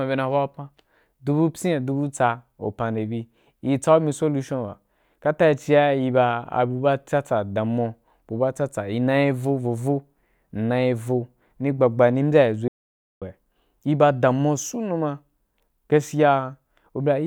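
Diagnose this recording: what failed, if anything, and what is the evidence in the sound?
An audio dropout to silence runs from 12.68 to 13.22 s: speech cuts off and resumes after about 0.54 s of digital silence with no room tone. The waveform shows a flat line, the spectrogram a blank band. The input link was likely lost while the recorder kept writing zeros.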